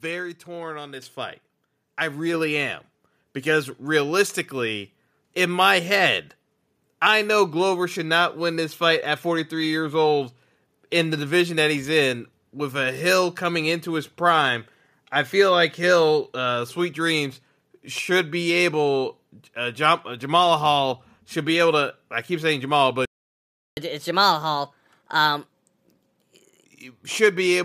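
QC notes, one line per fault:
1.02 s, microphone volume stepped up: between "torn on" and "fight I", voice and background jump about 7 dB together; the waveform envelope steps up abruptly.
23.05–23.77 s, playback stall: output falls silent for 0.72 s, likely because the player ran out of data; the spectrogram shows a blank vertical band.
23.77–26.65 s, catch-up at higher speed: the backlog plays at 1.25x, raising pitch about four semitones; spectrogram harmonics shift upward, then drop back.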